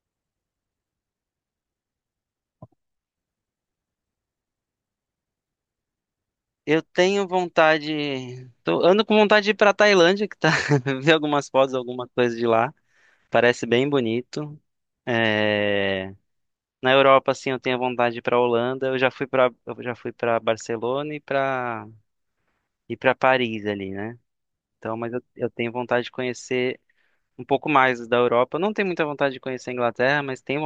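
No technical faults can be heard anywhere in the speech recording, which keeps a steady, continuous signal throughout.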